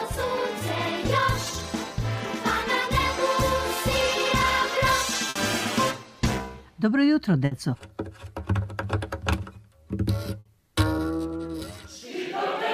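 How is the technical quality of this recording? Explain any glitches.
Three short glitches interrupt the audio, at 5.29–5.38 s, 7.45–7.54 s and 10.39–10.48 s. Each is a burst of packet loss: the sound freezes into a fading buzz or hiss for about 60 ms, then jumps ahead with about 60 ms missing. The receiver stretched the last audio it had to cover packets that were lost or arrived too late.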